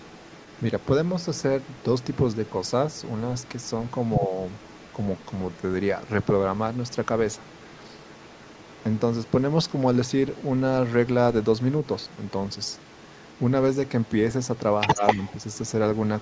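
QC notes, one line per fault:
0.0–10.51 s, 11.43–14.11 s and 14.54 s to the end, other side's voice leaking through: a faint second voice, quieter from 11.43 s, then about as loud as the talker from 14.54 s, likely loudspeaker echo the canceller failed to remove.
4.28–4.32 s and 14.95–15.2 s, speech suppressed in double talk: the talker briefly dips, slightly at first, then deeper for about 150 ms, likely from the canceller turning down both overlapping voices.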